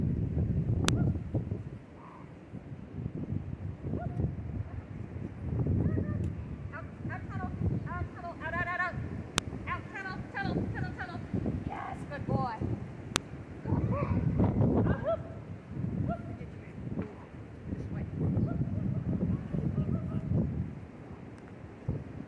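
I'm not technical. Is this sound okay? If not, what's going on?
No. There are three sharp clicks, at about 0.88, 9.38 and 13.16 seconds. Each is a single loud snap that lasts only an instant. The cause is a file header played as audio. The recording was built from separate pieces joined together. Each piece began with a short block of file information that was never removed. The player treated that block as sound, so a click appears wherever a new piece starts.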